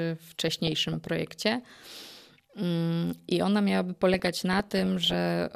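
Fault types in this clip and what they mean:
DAB burbling: weak digital radio reception lets bit errors slip past error correction into the MP2 data, so single sub-bands leap in level for a frame at a time. Here the speech is overlaid with burbling noise blips from 0.47 to 1.1 s, and again, slightly denser, from 4.14 to 5.14 s, which fits an error rate under about one percent. Unlike packet-loss dropouts, the sound never cuts to silence. It warbles and gurgles instead.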